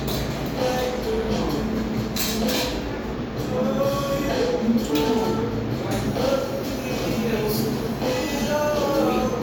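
No technical faults can be heard anywhere in the recording. The everyday sound comes through steadily, with nothing interrupting or disturbing it at any point.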